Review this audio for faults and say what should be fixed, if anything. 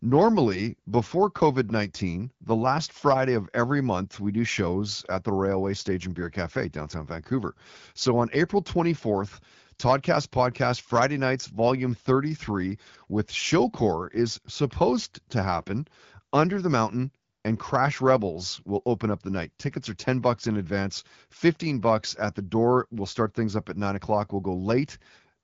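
No faults found; nothing needs fixing.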